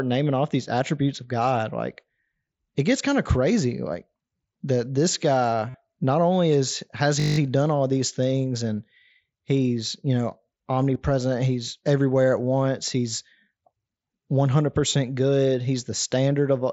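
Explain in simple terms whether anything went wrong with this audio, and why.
Concealed Bluetooth headset packet loss: audio packets from the headset dropped, so the phone filled the gaps by repeating recent sound. At 5.70 to 5.75 s this gives a brief buzzy tone, and at 10.94 s a tiny patch.

System hang loop: at 7.2 to 7.38 s the computer briefly froze while the sound hardware replayed one 20 ms scrap nine times, making a short 50 Hz buzz.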